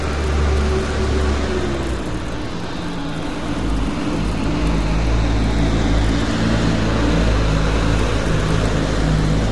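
Across the whole clip the sound is rough and grainy, and the damage is plainly audible. Nothing is present above 11.6 kHz. This is likely low-delay AAC compression, AAC-ELD. Its short frames cost bits, and the coarseness fits about 32 kbps.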